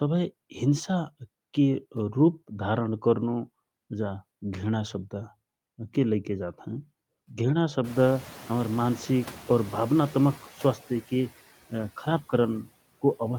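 Noise suppressor artifacts run through the whole of this speech clip: the suppressor pulls down the bands it judges to be steady noise by about 18 dB, frame by frame, so the background dips in the pauses and swells back beneath the speech. Noise suppressor catching up follows from 7.84 s to 10.39 s. Around 8 s the room noise jumps by about 22 dB, sitting about 19 dB below the speech, and the suppressor's noise estimate trails the change. At first only about 7 dB is removed, so the louder noise comes through with less reduction and then fades over roughly 2.55 s as the estimate settles.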